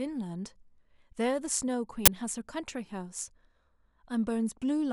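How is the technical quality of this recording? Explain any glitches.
There's one clear glitch in this speech recording. At about 2.06 to 2.08 s, an uninitialised buffer plays: a 20 ms block went out before any audio was written into it, so leftover memory got read as samples. You hear a short, loud crack or burst of digital noise.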